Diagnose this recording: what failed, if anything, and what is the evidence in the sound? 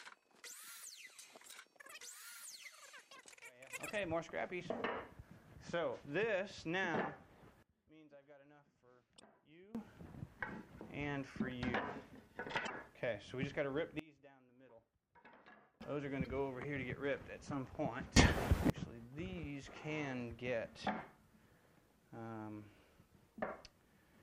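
Sudden gain jumps at 7.63–9.75 s (about 24 dB down), 13.99–15.81 s (about 22 dB down) and 18.17–18.70 s (about 24 dB up): sound and noise floor step together instantly, with no fade, likely an unramped digital gain change.

Damaged data in a compressed stream at 9.16–9.21 s, 12.63–12.70 s and 16.24–16.27 s: short glitches as the decoder loses frame sync, unlike a gain step's level change.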